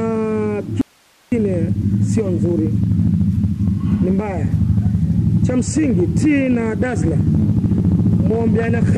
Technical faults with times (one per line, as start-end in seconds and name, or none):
0.81-1.32 audio dropout to a faint residue